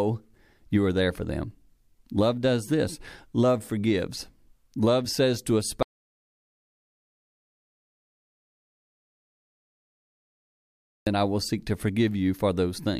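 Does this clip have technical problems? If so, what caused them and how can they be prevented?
Yes. An audio dropout to silence runs from 5.83 to 11.07 s, after "says to a" and before "I will seek to". About 5.2 s of speech is lost to silence, likely because the input was disconnected or muted. Unlike a natural pause, the gap has no room tone. Secure cables and links, and monitor input levels while recording.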